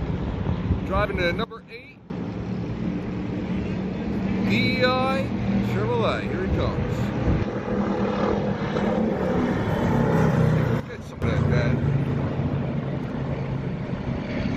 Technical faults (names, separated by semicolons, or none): sudden gain jump